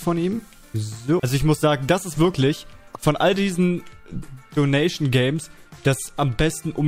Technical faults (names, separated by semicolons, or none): none